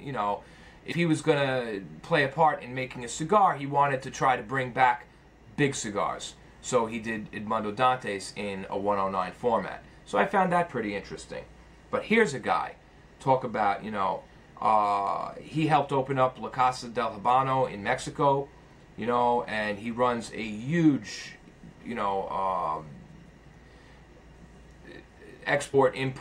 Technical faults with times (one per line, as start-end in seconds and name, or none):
0.91-0.93 compressed frames skipped
25.73 compressed frames skipped